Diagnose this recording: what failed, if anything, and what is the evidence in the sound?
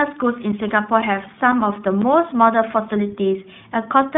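Two things went wrong here, one at the codec stage and one down at the driver or buffer level. The whole clip has gone through iLBC coding. The speech sits in a narrow telephone band, roughly 150 Hz to 3.6 kHz, with nothing above 3.8 kHz, and the codec damage is plainly audible as a rough, slightly synthetic edge. Each 20 ms frame is coded on its own, which fits iLBC's 15.2 kbps mode.

Separately, there are periodic USB or driver dropouts between 0.52 and 2.03 s. You get about four short gaps, each around 10 ms of dead silence, spaced evenly every 0.5 s. They come through as regular ticks cutting into the speech. That fixed spacing points to something on the host, such as a background task stalling the USB bus or the audio driver, so the buffer starves briefly and gets filled with silence.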